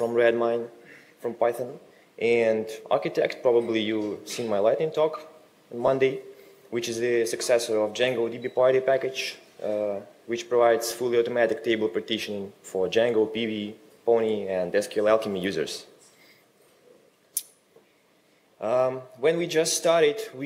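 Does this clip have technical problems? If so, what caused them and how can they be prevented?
Yes. Lost LE Audio frames occur at 5.87 s and 10.91 s; each gap of about 10 ms fits a single dropped Bluetooth frame. The LC3 decoder filled each gap by repeating the previous spectrum with scrambled phase, leaving a brief noisy smear in the sound. A stronger link with less radio interference and a shorter distance, or a larger receive buffer, would prevent these dropouts.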